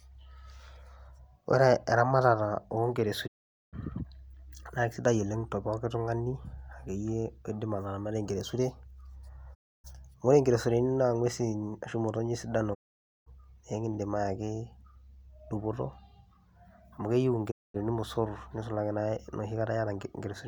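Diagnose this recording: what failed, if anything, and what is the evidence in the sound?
Digital broadcast dropout in reception at 3.26, 9.53, 12.73 and 17.50 s: the receiver lost frames and muted the speech for 0.22 to 0.51 s, fading within 20 ms.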